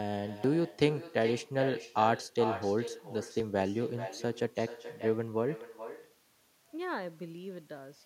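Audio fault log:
Throughout: echo with no canceller. The speech is shadowed by a quieter copy arriving roughly 0.4 seconds later, about 13 dB down. The far end's loudspeaker feeds its microphone and nothing removes it. So the sound returns after the network round trip, thinner.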